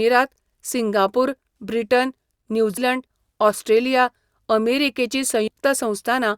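At 2.77 s, compressed frames are skipped. About 70 ms of speech never plays, and the sound jumps ahead. At 5.47 to 5.50 s a longer jump drops about a tenth of a second. Both jumps fit 20 ms codec frames.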